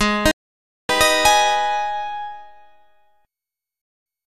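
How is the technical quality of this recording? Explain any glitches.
The recording has two digital broadcast dropouts. From 0.31 to 0.90 s, the sound cuts to silence for about 576 ms. From 3.82 to 4.06 s, it drops out again for 240 ms. Each cut uses a very fast fade of about 3 ms, so it sounds abrupt. The receiver stopped getting valid frames and muted until clean data returned. The gap lengths fit roughly 24 and 10 lost frames of 24 ms each. The missing sound never comes back.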